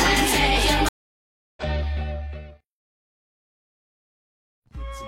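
At 0.89 s the audio drops out in a stream reconnect: the connection broke, playback went silent for about 0.68 s, and a fresh decoder picked the stream up again around 1.63 s. Because this is a live-style resume, the sound comes back roughly 0.7 s further along, so that stretch is skipped rather than delayed. On a waveform this is a flat gap with a cut-off edge before it; a spectrogram shows a blank vertical band with no decay tail.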